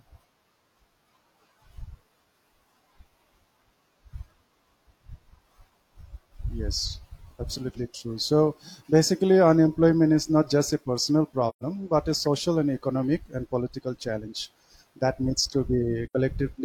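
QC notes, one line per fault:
11.49–11.63 s, AAC frame loss with muting: after "not just a personal", a silent gap of about 128 ms, roughly three frames, fades out and back in before "but a social and", unlike a hard dropout.
16.06–16.15 s, AAC frame loss with muting: after "challenge that needs to", a gap of about 85 ms where zeroed frames give a soft-edged hole.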